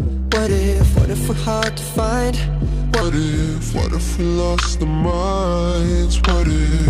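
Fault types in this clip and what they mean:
Section at the wrong speed: from about 3.02 s right through to the end, the audio suddenly runs at roughly 0.79 times its proper rate, so everything drags and drops about four semitones in pitch at the same moment. That joint shift in tempo and pitch is the giveaway. It's likely that this stretch was played back or edited against the wrong clock, which stretched it out instead of leaving it at its recorded speed.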